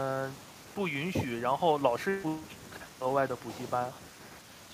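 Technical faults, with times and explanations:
No technical faults can be heard anywhere in this speech recording.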